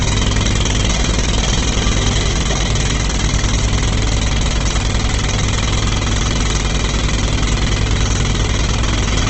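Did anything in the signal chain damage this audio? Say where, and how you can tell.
Yes, at the codec stage, the likely cause being heavy Opus compression in its music mode. Throughout, nothing sits above about 8.2 kHz, and tones come out rough and grainy, with noise standing in for missing detail, which fits a bitrate near 12 kbps.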